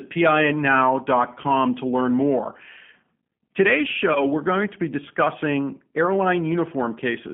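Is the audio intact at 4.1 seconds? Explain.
No. A packet went missing at 4.13 s, a gap that fits one 20 ms packet, and the decoder covered it by extrapolating from its last pitch and filter. Through 4.22 s the speech is stretched into a buzzy tone or coloured noise that fades, and it stays weakened into "we're going to be" while the decoder's frame-to-frame state recovers. Under this, the G.729 codec's 8 kbit/s coding holds the sound to a 150 Hz to 3.4 kHz line band, with a plainly rough, synthetic texture.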